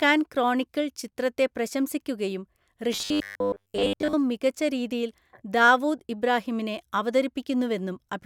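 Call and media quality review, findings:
Robotic sound from repeated short buffers, 2.93–4.13 s, after "ക്രോണിക്കിൾ ചിത്രത്തെ പ്രശംസിക്കുകയും", before "മികച്ച രീതിയിൽ ദാവൂദ് ഇബ്രാഹീമിനെ". Metallic 100 Hz buzz over speech. Likely jitter buffer underrun; a 10 ms chunk is replayed in place of most of the real audio.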